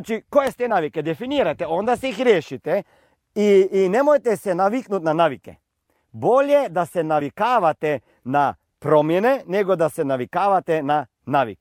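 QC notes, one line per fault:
0.70 s and 7.20 s, compressed frames skipped: the speech jumps ahead by a single frame of around 20 ms.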